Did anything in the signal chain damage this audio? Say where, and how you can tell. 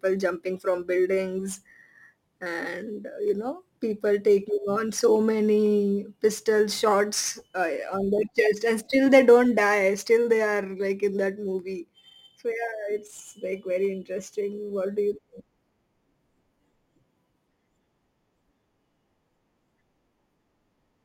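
Yes. The damage comes from the sample-format conversion stage, as crude rate conversion running for the whole clip. Behind the speech there's a gritty, inharmonic fizz, roughly 30 dB down, that rides on the louder and brighter sounds and has no musical relation to them. That fits a 48 kHz to 44.1 kHz change done by grabbing the nearest sample with no filtering. The dropped samples repeat in a fixed cycle, so the timing error turns into stray tones.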